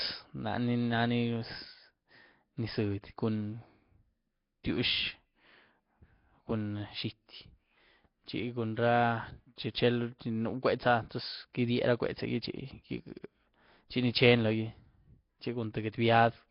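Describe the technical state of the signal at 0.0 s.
At 0.0 s the speech already has a rough, hissy halo and a smeared, underwater character, with nothing above about 5.3 kHz, present throughout. This is likely Nellymoser compression at a low bitrate: coarse fixed-rate block coding starves weak bands and fills them with noise.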